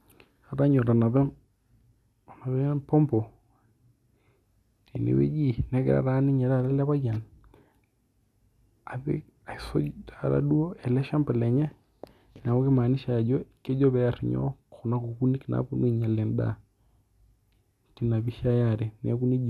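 No technical faults can be heard in this recording.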